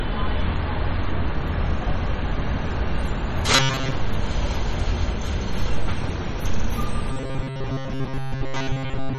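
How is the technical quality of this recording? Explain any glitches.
The recording is audibly degraded, with a compression fault running through the whole clip and two stretches of robotic buzzing.

MP3 compression is the likely cause of the damage present from start to finish. The sound has a watery, swirling texture as weak frequency components flicker in and out between frames. Smeared attacks point to a low bitrate around 32 kbps. Unlike the buzz below, this warble has no steady pitch.

Robotic sound from repeated short buffers occurs from 3.56 to 3.92 s and again from 7.11 s to the very end at 9.18 s. In both stretches a rigid metallic buzz at 134 Hz is heard, and most of the audio is repeats rather than new material. When fresh audio arrives late, the same few milliseconds get replayed to fill the gap. A repeat every 7.5 ms forces that fixed tone, which is likely why the pitch is locked rather than swirling like the compression.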